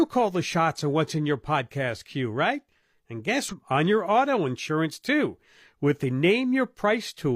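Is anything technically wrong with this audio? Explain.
Yes. From 3.48 to 3.53 s the speech jumps forward with a brief blip, likely a stream segment skipped: a segment failed to load and playback continued with the next one.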